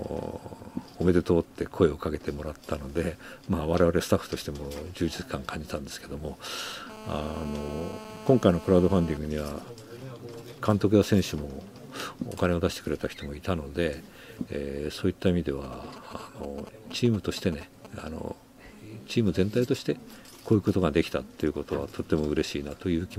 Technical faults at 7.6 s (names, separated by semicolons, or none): GSM phone buzz